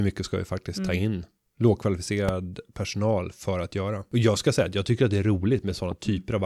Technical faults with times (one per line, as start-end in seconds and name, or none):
2.29-2.31 loud pop
5.92-5.94 loud pop